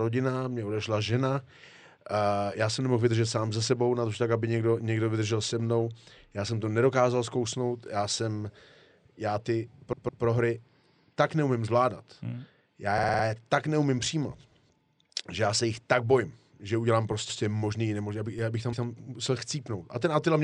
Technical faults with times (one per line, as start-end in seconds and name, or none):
9.92-10.23 repeated frames
12.97-13.23 repeated frames
17.28-17.39 repeated frames
18.38 DC step
18.72-18.85 repeated frames